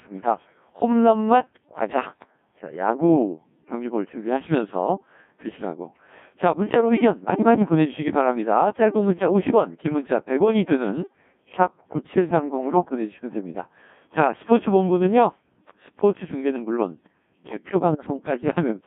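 Throughout, the speech is rebuilt by the Codec 2 vocoder from pitch, voicing, energy and envelope alone, giving buzzy, robotic tones within 150 Hz to 3.6 kHz, heavy damage fitting roughly 1.6 kbit/s, unlike waveform codecs' smeared hiss. From 17.92 to 18.06 s, bit errors on digital voice radio, at around 5 percent, corrupt what sounds like two frames, producing warbling pitch and level jumps rather than the silence of a dropout.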